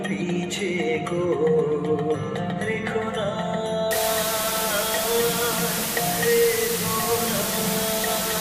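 Low bit depth with dither runs from 3.91 s to the end, a steady, even hiss about as loud as the sound itself, which fits dithered rounding to 3 bits.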